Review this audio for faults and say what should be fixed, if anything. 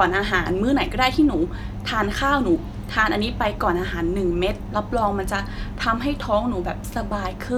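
Nothing in this speech recording calls for a fix. No fault turns up anywhere in it.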